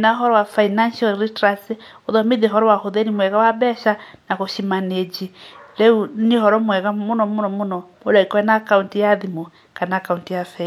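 No technical faults are audible anywhere in the speech.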